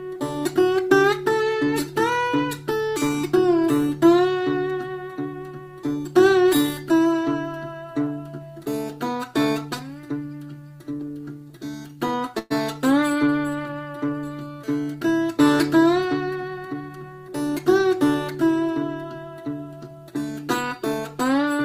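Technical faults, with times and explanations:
10.69 to 12.52 s, repeated stalls (stutter): the packets kept turning up late, so the jitter buffer ran dry 16 times, the longest wait being 118 ms. Each time the receiver stretched the last bit of sound to cover the gap. Nothing's lost, about 274 ms is padded, and it drags and stutters.
13.42 to 14.05 s, jitter buffer slow-down: the buffer was short on reserve, so the receiver repeated single pitch periods or scraps of pauses over and over, adding 76 ms. Playback drops to about 89% speed at unchanged pitch, so sounds come out drawn out.
15.97 to 16.97 s, jitter buffer speed-up: too much audio had piled up in the buffer, so the receiver trimmed short pieces of one or a few pitch periods, roughly 150 ms in all. It runs at about 113% speed with the pitch held, and it sounds hurried.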